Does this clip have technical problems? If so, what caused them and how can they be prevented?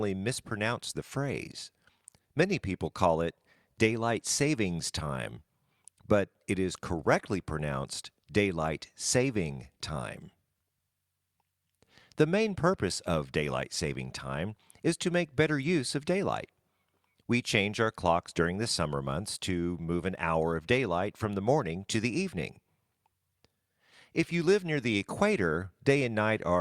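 No, there are no technical problems to report here.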